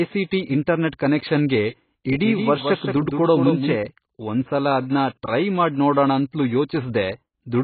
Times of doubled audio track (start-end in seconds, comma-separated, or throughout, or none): 2.22-3.76